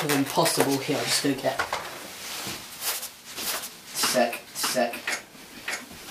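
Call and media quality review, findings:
Doubled audio track from 3.36 s to end. Second full-band copy trailing by about 0.7 s, roughly equal level. Likely cause: slower second capture path or misaligned edit mixing two copies. Not acoustic echo: no decay, no room colour, no loss of level or bandwidth, and the copy switches in abruptly at 3.36 s rather than building with the sound.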